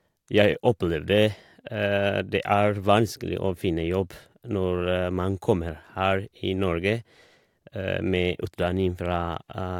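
No technical faults can be heard in this speech recording. Nothing in the signal calls for comment at any point.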